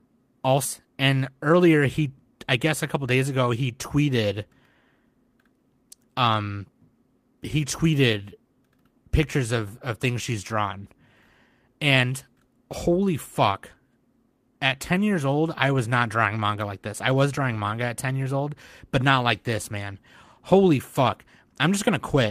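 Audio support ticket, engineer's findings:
Skip ahead, 0.65 s: likely jitter buffer overflow discarded roughly 0.7 s of queued speech; playback jumps forward with no gap, the two sides joined almost directly.

Jitter buffer speed-up, 0.85–2.57 s and 2.97–3.24 s: buffer draining excess delay by cutting pitch periods; speech runs 110–111% fast at unchanged pitch, hurried just before "ago he tweeted".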